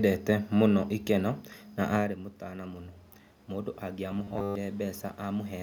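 Just after "na arĩ mũtana mũno", at 3.49 s, the speech and the room noise behind it swell together, climbing slowly until about 5.58 s. This is automatic gain rising. The level reaching the microphone had dropped by about 12 dB, and the gain control responded by pushing its gain up by about 4 dB over roughly two seconds, so the background grows with the voice. The earlier level shift near 2 s is the talker moving and not a fault.

From 4.11 s to 4.55 s, in the middle of that rise, the speech turns into a stiff, metallic buzz fixed at 100 Hz that still loosely follows the syllables. This is robotic sound from repeated short buffers. Audio was likely arriving too rarely, so the software kept replaying the last chunk, about 10 ms long, which sets the 100 Hz pitch. Repeats take up most of that stretch, and the real audio they replace is lost.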